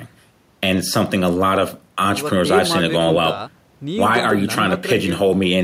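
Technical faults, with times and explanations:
4.15 to 4.31 s, loose connector crackle: for about 0.16 s the speech is broken by an irregular burst of scratchy crackle, as a worn or dirty contact somewhere in the cable path rapidly makes and loses connection, chopping the signal on and off. Unlike evenly spaced digital clicks or dropouts, the bursts here are ragged and uneven in spacing and level, the signature of a contact being jostled.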